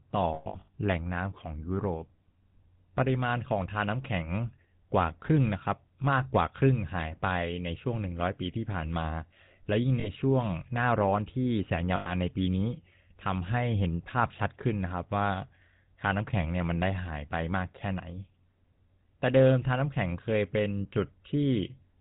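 A speech clip carried through the GSM full-rate codec throughout, with audible coding damage consistent with its 13 kbps rate. The codec models the vocal tract and excites it with a sparse, regularly spaced pulse train, so the voice has a buzzy, gravelly roughness, and nothing above 4 kHz survives, leaving the sound band-limited and dull. Lost GSM frames occur at three points. Between 0.34 and 0.78 s, about 300 ms of signal is missing in gaps scattered across 440 ms, the longest of them around a tenth of a second. Shorter drops follow from 10.0 to 10.1 s (40 ms) and from 11.96 to 12.15 s (100 ms). In each gap the decoder repeats the last good frame's parameters, so the sound hangs as a rough, metallic ring. None of these gaps lasts long enough to fade fully to silence.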